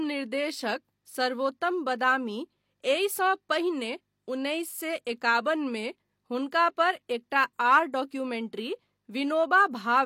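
At 5.05 s there is pre-echo: the codec spread quantisation noise across the whole transform block, so noise meant for a sharp speech attack leaks about 18 ms ahead of it. A brief hiss precedes the onset, which sounds softened and smeared.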